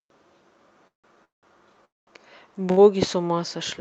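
Speech that drops out three times, at 0.87 to 1.06 s, 1.24 to 1.45 s and 1.85 to 2.09 s, each a brief buzz or hiss fading into roughly 0.14, 0.16 and 0.2 s of silence before resuming without loss: a call audio freeze, likely from delayed packets draining the jitter buffer. At 2.71 to 2.79 s a sound is held about 60 ms too long, a short stall from a late packet stretching audio until it arrived. The call codec's top end stops near 8 kHz, which fits Opus at about 32 kbps.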